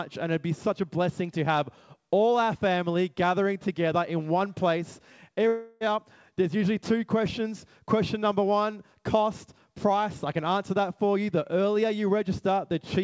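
From 5.48 to 5.84 s, audio stops arriving, likely a long network dropout. The receiver stretches the last sound into a buzzy fill that fades over about a third of a second, and about 330 ms of audio is lost. Playback resumes afterwards, band-limited to 8 kHz by the call codec.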